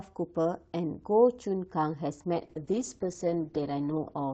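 Up to 2.35 s the speech comes through the Opus call path with its normal coding texture, and then there's a call bitrate drop that lasts to the end of the clip. The encoder gets starved, so the voice turns rougher and watery, and the top end closes in from about 12 kHz to 8 kHz, making it duller. The worst stretch lasts 1.38 s, and the sound fits a drop from roughly 32 kbps to 8 kbps. It hasn't recovered by the time the clip ends.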